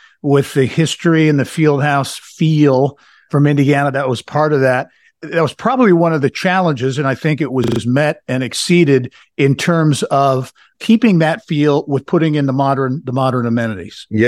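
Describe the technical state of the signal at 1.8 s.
At 1.8 s the speech signal is intact, with no audible fault at that moment.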